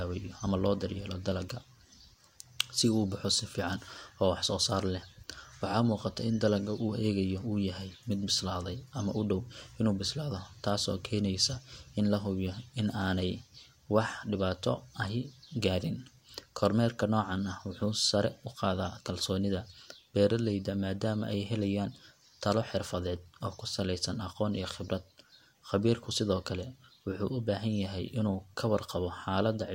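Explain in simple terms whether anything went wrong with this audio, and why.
Nothing went wrong here; no technical fault can be heard anywhere in this speech recording.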